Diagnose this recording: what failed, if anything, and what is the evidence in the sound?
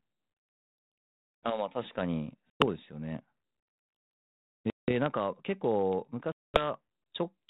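The network stage failed: packet loss on an ADPCM call, with runs of packets dropped and replaced by silence, from a handful to about ten packets per event. The speech has hard-edged holes at 0.6 to 0.76 s (120 ms lost in scattered gaps, the longest 60 ms), 2.5 to 2.64 s (100 ms), 4.7 to 5.06 s (180 ms) and 6.32 to 6.63 s (220 ms). After each hole the decoder's adaptive predictor and step size no longer match the sender's, so the speech returns slightly distorted, settling within some tens of milliseconds. The 32 kbit/s G.726 link can be heard through it, cut off above 4 kHz.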